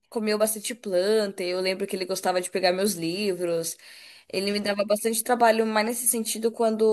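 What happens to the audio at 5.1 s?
Nothing goes wrong at 5.1 s: the speech carries on intact through that moment, with no dropout, click or distortion.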